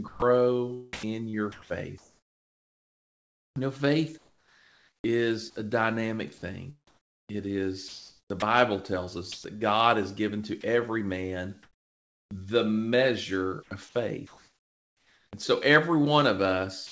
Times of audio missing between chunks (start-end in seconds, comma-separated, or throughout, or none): none